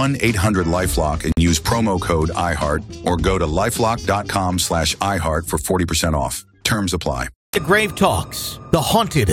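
At 1.32 s the sound drops out for about 50 ms, a short hole with edges softened by codec smearing, and then resumes exactly where it left off, with nothing missing. This is a gap at a join of encoded pieces: the audio was encoded in separate parts and joined without trimming, so the encoder's start-up delay and the padding in its final frame remain as silence at the seam.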